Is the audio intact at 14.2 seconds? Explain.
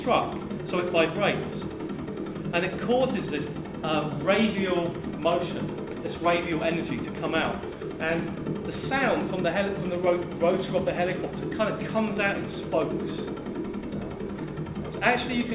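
Yes, at 14.2 seconds the audio plays through cleanly, with no dropout, click, distortion or other fault at that moment.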